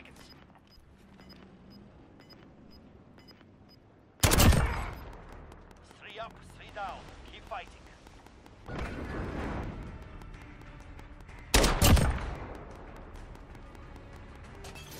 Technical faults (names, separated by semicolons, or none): train of clicks